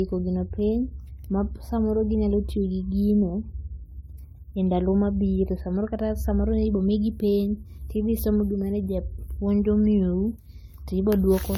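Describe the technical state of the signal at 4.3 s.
At 4.3 s the speech carries generation loss, present across the whole clip rather than at this moment alone. It sounds swirly, hollow and smeared, with consonant attacks blurred. The likely cause is repeated lossy re-encoding, around five passes through an AAC-style codec at a rate near 96 kbit/s, each requantising on a shifted frame grid. On a spectrogram, nothing lies above 20 kHz, and the band below shows blocky, time-smeared onsets.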